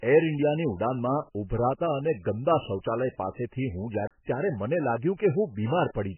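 Throughout the clip, the speech was likely squeezed through MP3 compression at a very low bitrate, around 10 kbps. Starved of bits, the encoder removed everything above 3 kHz and let weak frequency lines flicker between frames, leaving the speech dull, watery and swirly, with smeared onsets.

From 4.07 to 4.11 s comes a CD skip. The laser jumped to a different turn of the disc's spiral, and the player muted for about 30 ms before resuming elsewhere, heard as a tick and an abrupt jump in the speech.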